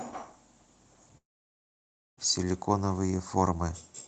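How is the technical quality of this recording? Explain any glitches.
The quality is marred by one clear break in the sound. From 1.17 to 2.19 s, a long network dropout likely stopped audio from arriving for about a second. The receiver briefly stretched the last sound into a fading buzz, leaving near-silence for roughly 0.96 s, and then the speech resumed with that stretch missing. The call codec's coding noise and its 8 kHz ceiling on high frequencies, consistent with Opus at a modest bitrate, can also be heard throughout.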